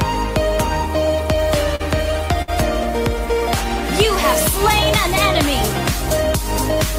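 Short stalls from a late packet occur at 1.75 to 1.82 s and 2.42 to 2.50 s. Each time the jitter buffer ran dry, so the receiver stretched the sound for about 41 ms and 57 ms before resuming, with nothing lost.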